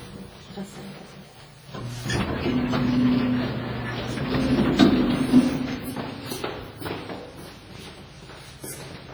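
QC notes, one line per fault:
throughout: WMA compression, likely a low-bitrate encode near 24 kbps. Long transform blocks smear quantisation noise into heavy ringing, washy smear, and hiss breathing with the sound.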